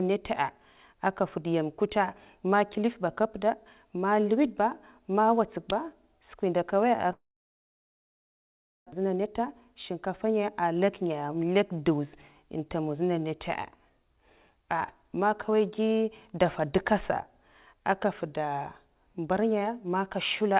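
Long network dropout, 7.12 to 8.95 s: the speech gives way to a brief fading continuation of the last sound, then near-silence for about 1.7 s. It resumes with roughly 1.6 s of speech gone, likely because no packets reached the receiver, which could only conceal the gap.

Jitter buffer speed-up, 9.03 to 11.1 s: after the dropout the buffer held too much audio, so the receiver trimmed repeated pitch-period slices, around 150 ms in all. The speech runs about 6% fast at unchanged pitch and sounds slightly hurried, all within the 4 kHz band of the narrowband call codec.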